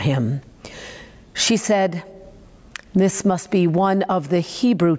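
Gain pumping runs through the whole clip. The gain ducks sharply under each loud syllable, by about 20 dB. The speech sounds flattened and squashed. The likely cause is input gain set far too high, with a fast limiter clamping it back.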